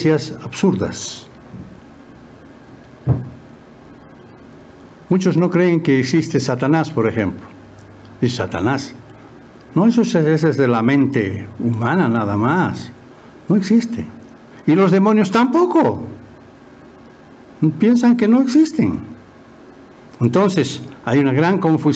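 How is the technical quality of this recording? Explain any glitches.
The main problem is gain pumping that runs through the whole recording. The level keeps swinging by around 10 dB. The likely cause is input gain set far too high for the mic, with a fast limiter or compressor clamping down on every peak and letting go in between. That squashes loud and quiet parts together and gives the whole thing a breathing, pumping feel. The call-style mic processing is doing its normal job, though, so nothing above 8 kHz comes through.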